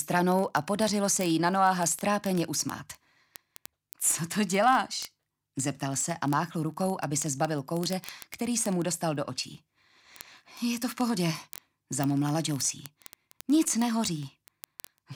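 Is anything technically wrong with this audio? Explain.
Yes. Word clock ticks run from 0.12 s to 15.14 s: a receiver on an unlocked clock, drifting by roughly 0.1%, drops or repeats a sample about every 20 ms, giving hundreds of sharp, uneven clicks. Spectrograms show evenly spaced thin vertical lines; waveforms show single-sample spikes.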